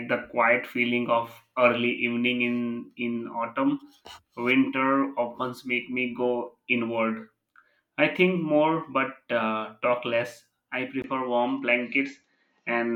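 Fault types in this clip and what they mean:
Input switched to a poorer device: after "uh talk less I", a 20 ms gap precedes duller speech, likely a change of input device. The spectrogram loses everything above 7.6 kHz and gains a noise floor about 50 dB down; waveform level holds steady.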